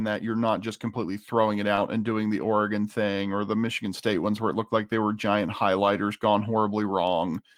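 A speech clip with a brief packet-loss event between "just completely throwing it" and "and doing the", at 1.75 to 1.79 s. The first 20 ms, from 1.75 s, is short concealed packet loss: that audio never arrived in time, so the receiver extended the preceding sound, pitched if voiced or as shaped noise if not, then blended back. This gives a brief smear or wobble, and a short consonant can disappear. The next 20 ms, from 1.77 to 1.79 s, is a lost packet rebuilt from error correction. That single packet was also lost, but the following packet carried a low-bitrate copy through Opus in-band forward error correction, so there is no gap, only a rougher, noisier stretch.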